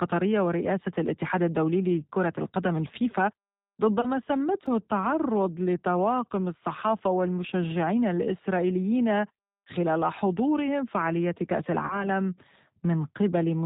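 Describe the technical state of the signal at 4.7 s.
A repeated buffer at 4.66 s: a roughly 3 ms block, which fits a 128-sample buffer, plays three extra times with hard joins, giving a brief buzz with nothing lost. G.729 codec coding runs through this moment at 8 kbit/s, cutting everything above 4 kHz and leaving the speech plainly rough and synthetic.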